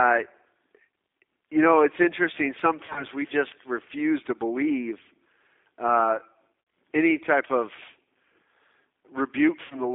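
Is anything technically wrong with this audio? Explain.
Yes. The whole speech clip has passed through a G.729 codec. This 8 kbit/s model-based coding squeezes the band to roughly 250 Hz to 3.6 kHz and leaves a rough, synthetic edge.

VoIP packet loss concealed by the speech codec occurs at 2.86 to 3.04 s, 6.61 to 6.67 s, and 9.63 to 9.82 s. The decoder fills the gaps from its last pitch and filter. Each gap becomes a buzzy or noisy, fading smear with a weak recovery.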